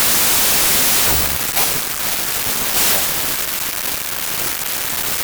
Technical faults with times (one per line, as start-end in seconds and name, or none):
0.00-5.24 wrong sample width